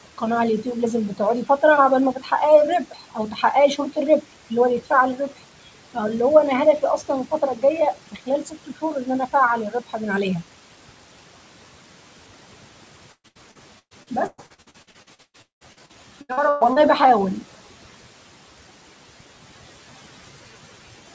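Right from the start there's overdone noise removal. The suppressor is clamping down so hard that the background drops and breaks up into little twinkling specks, and the quieter bits of the speech get pulled down along with it.

Between 2.85 and 3.43 s the noise suppressor cuts into the speech itself, treating part of it as noise. It dips by up to about 9 dB across roughly a sixth of a second in total, so those sounds come out swallowed and faint.

From 13.12 to 16.79 s there's repeated packet loss, with a robotic sound. Holes keep arriving back to back, the longest about 190 ms. Each one gets patched by stretching the last sound, so about 40% of that stretch is concealment. It comes across choppy, with pieces missing.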